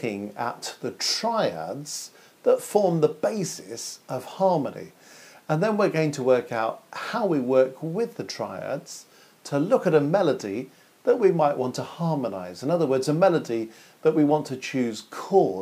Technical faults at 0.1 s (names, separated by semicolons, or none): none